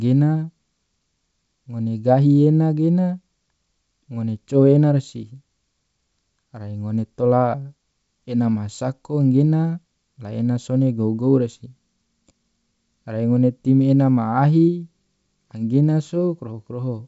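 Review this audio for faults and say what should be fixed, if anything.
No faults turn up in this audio, so nothing needs to be fixed.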